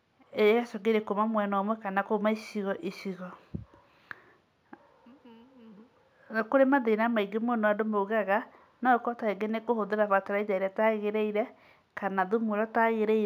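Imaging from linear upsampling runs through the whole speech clip. The rate appears to have been raised, likely from 16 kHz, by straight-line interpolation between samples, which dulls the top of the band and leaves a faint mirrored copy of the spectrum between 8 and 16 kHz, roughly 40 dB below the signal.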